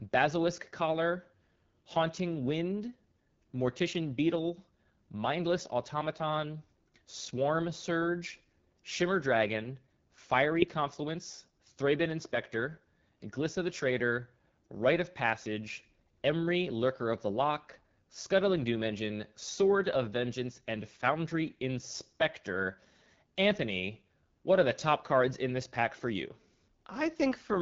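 Throughout, AMR wideband (HD Voice) coding at a low rate, which fits 8.85 kbit/s, leaves the speech raspy; the spectrogram shows nothing above 7.1 kHz and smeared noise-like upper bands.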